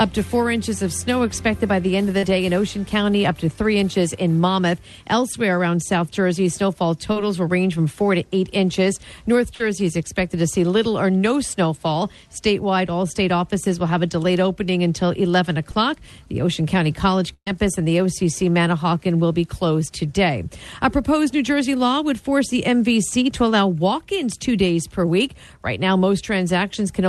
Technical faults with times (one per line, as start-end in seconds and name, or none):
2.18-2.23 short concealed packet loss
9.55-9.61 burst of packet loss
15.72 short concealed packet loss
17.34-17.47 burst of packet loss